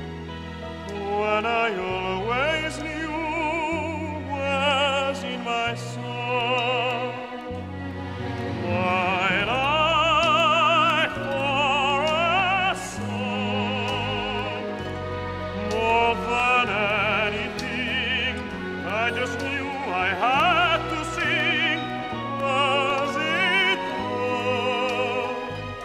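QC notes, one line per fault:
5.91–25.40 s, periodic USB or driver dropouts: a regular tick every 0.5 s, some forty in all. Each time, something stalls the audio path and roughly half a millisecond of signal is lost and replaced with silence. The abrupt drop to zero and jump back cause the click, so the ticks are heard only where sound is present. On the waveform, each one is a hairline gap to zero. On the spectrogram, each is a thin vertical broadband stripe at even spacing.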